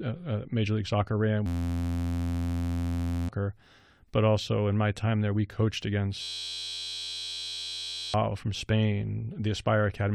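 A steady, flat buzz at about 86 Hz replaces the speech from 1.46 to 3.29 s, and again from 6.22 to 8.14 s, just after "time there we coached". Each is a system hang loop: the machine froze while the sound hardware kept replaying one 11.61 ms slice of its ring buffer, which fits a 512-sample buffer. Because that slice is so short, its exact repetition fuses into a buzz rather than a stutter, and about two seconds of speech is lost each time.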